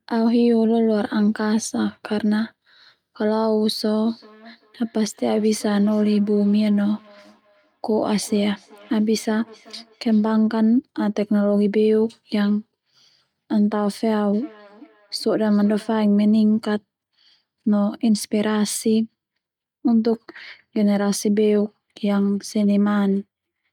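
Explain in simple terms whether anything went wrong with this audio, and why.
Feedback echo between two devices appears from 4.06 to 10.35 s and again from 14.33 to 16.08 s. Two devices in the same room are on one call, so one device's microphone picks up the other's loudspeaker and sends the speech back round. You hear each word return as a quiet repeat roughly every 0.4 seconds. Room reverberation would blur the speech instead of returning it at a steady interval.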